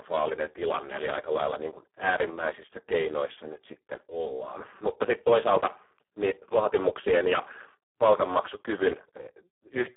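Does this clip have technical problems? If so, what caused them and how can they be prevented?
Yes: Speex codec damage throughout, a hoarse, robotic telephone-band sound that fits a very low setting near 4 kbps. A spectrogram shows smeared harmonics and nothing above 3.8 kHz. Prevent it by using a higher Speex quality setting or a modern codec such as Opus.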